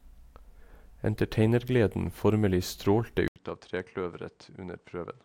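At 3.28 s, after "formelig strålte", the speech drops out for 80 ms. It returns duller, about 10 dB quieter, nothing above 9.2 kHz, with faint new noise: likely an input switched to a poorer device.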